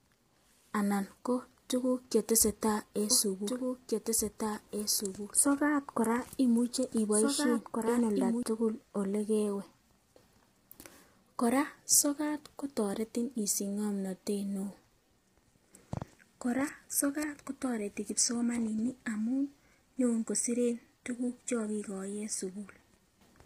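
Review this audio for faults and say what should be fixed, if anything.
Low-delay AAC compression runs through the whole clip. The speech sounds rough and grainy, with noise filling the gaps between harmonics and a thin, synthetic-sounding top band. The likely cause is AAC-ELD coding at a low bitrate, around 24 kbps. Its short frames resolve pitch harmonics poorly and leave too few bits for clean detail. Encoding at a higher bitrate, or with a longer-frame codec where latency allows, would prevent this.

A doubled audio track appears from 3.11 s to 8.43 s, just after "ko tukuk chetesetai en". A full-band copy of the speech trails the original by roughly two seconds, about 5 dB quieter, with no decay or room colour. It cuts in and out abruptly. This likely comes from a second, slower capture path or from an edit holding two misaligned copies. Removing the duplicate route, or the stray copy in the edit, would prevent it.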